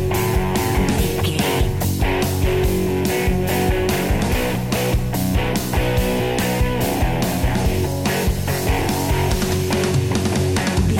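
No dropouts, glitches, distortion or level problems turn up anywhere in the audio.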